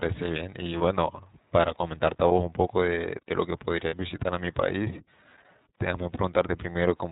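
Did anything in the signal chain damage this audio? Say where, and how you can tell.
Yes. At the codec stage, the audio went through iLBC. Nothing above 4 kHz survives, and the speech sounds rough and slightly synthetic throughout, which fits the 13.33 kbps, 30 ms frame mode.

At the network stage, lost iLBC frames appear at 0.78, 2.28, 3.87 and 6.14 s. Each gap is about 30 ms, except the one at 3.87 s, which is about 60 ms. The decoder repeated the last pitch cycle with noise, so each gap sounds like a brief buzzy held vowel. The voice is right again almost at once after.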